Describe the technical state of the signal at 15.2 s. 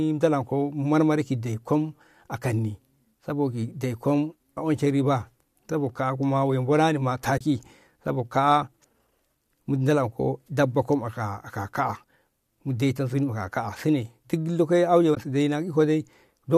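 AAC frame loss with muting runs from 15.15 to 15.17 s. The missing 20 ms, which fits two short low-delay frames, was decoded as silence, and the overlapping windows fade the sound out and back in, leaving a brief soft-edged gap.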